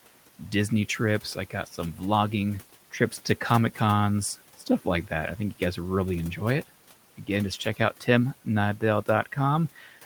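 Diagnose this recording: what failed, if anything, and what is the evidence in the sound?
Speech cut by the noise suppressor, in call processing: after 9.76 s it mistook speech for noise, pulling it down about 8 dB; spectrogram energy visibly thins.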